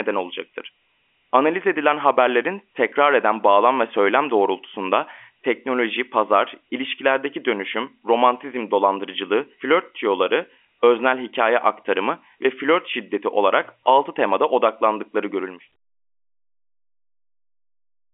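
No technical faults are audible in this speech.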